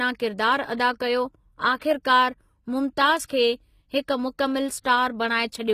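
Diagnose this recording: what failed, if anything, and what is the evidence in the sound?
The codec stage is at fault throughout the clip. The speech has plainly audible coding damage, and the treble is bright but synthetic. Sibilants come out gritty and metallic, and nothing is present above 14.9 kHz. This is likely HE-AAC compression at a low rate, which fits a bitrate around 20 kbps. Only the lower spectrum is coded. The top is rebuilt by spectral band replication, copying lower bands upward under a coarse envelope, so harmonics fail to line up across the crossover.

Pre-echo, from the same codec stage, appears twice. A short hiss runs from 1.77 to 1.81 s, spreading about 43 ms ahead of an attack, and another runs from 3.26 to 3.30 s, spreading about 38 ms. Both attacks sound softened and smeared. The transform spreads its quantisation noise evenly across each block. When a sharp onset lands late in a block, noise sized for the loud part leaks into the quiet stretch before it.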